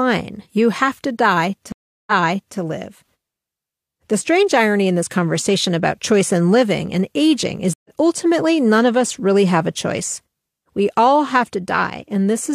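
At 1.72 s, after "you have to die", the speech drops out for 348 ms, then resumes 511 ms earlier, repeating a stretch. At 7.74 s, after "living and aging is", a 110 ms gap skips roughly a tenth of a second before "ultimately none of us". Both are stream reconnects: the connection broke and a fresh decoder restarted mid-stream.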